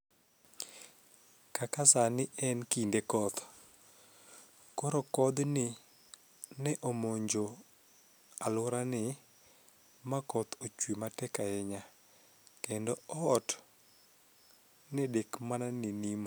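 Listening closely to the speech, nothing stood out as a technical problem at any point.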